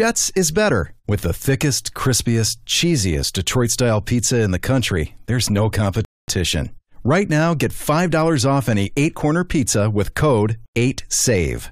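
Speech, with one rebuffering stall. At 6.05 s the sound drops to silence until 6.28 s. It then resumes exactly where it stopped, adding 0.23 s.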